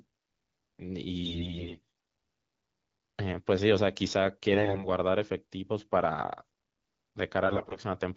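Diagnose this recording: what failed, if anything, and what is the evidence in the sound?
AMR bit errors hit the speech at 1.23–1.79 s, 4.52–4.88 s and 7.45–7.80 s, a network-stage fault on the radio link. In each stretch the speech keeps roughly its pitch and loudness but turns hoarse, scratchy and gargly, worst in the first burst, where around a third of the bits are flipped, and milder later. Corrupted low-priority bits slipped past the checksum, misplacing excitation pulses and skewing fine pitch, gain and spectral values inside the AMR-WB decoder.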